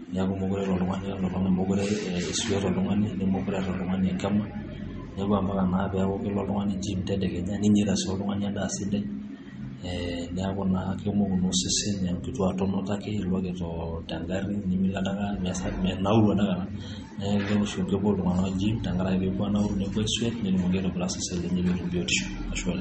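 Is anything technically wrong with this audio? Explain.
Yes. Throughout, the speech shows MP3 compression damage: nothing above about 8.4 kHz, plus a watery swirl. This is likely low-bitrate encoding near 32 kbps dropping weak frequency lines frame by frame.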